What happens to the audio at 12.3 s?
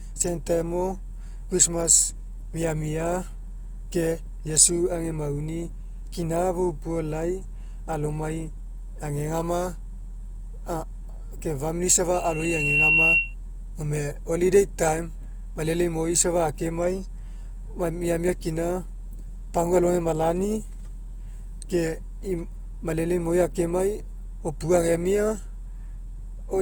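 A loudspeaker feedback squeal runs from 12.13 to 13.35 s. The microphone catches its own loudspeaker, and a steady 2.7 kHz tone builds over about 0.7 s to roughly 10 dB above the speech. Underneath, the speech sounds grainy and rough, likely from Opus compression at a low rate, around 24 kbps.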